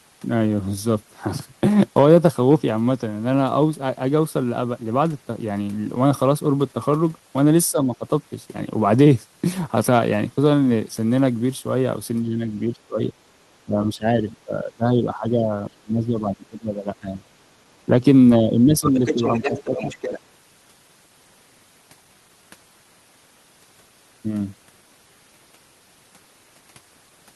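Speech in which the talker's level repeatedly sinks while the far end is evidently talking, the pattern of speech suppressed in double talk, likely from an echo canceller that cannot tell the local voice from loudspeaker echo and ducks both. Dips fall at 7.71–8.05, 12.22–12.48, 12.69–13.17, 13.65–14.28, 14.45–17.28 (the longest, about two seconds affected), 18.4–19.22 and 19.4–19.74 s, reaching about 5 to 20 dB down. Unlike packet-loss dropouts, these are level dips while both sides talk. From 18.85 to 20.2 s the other side's voice leaks through, a second voice about 10 dB below the talker and overlapping the last two dips. It is a separate, unrelated voice, not a delayed copy of the talker as room reverb or a slapback echo would be.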